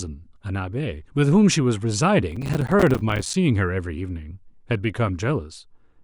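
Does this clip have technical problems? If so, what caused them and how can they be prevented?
Yes. Processor overload crackle runs from 2.32 to 3.34 s. The processor kept missing deadlines for short buffers of around 5 ms, leaving dozens of hard-edged silent gaps that tear the speech into gritty crackle. A larger buffer or lighter system load prevents it.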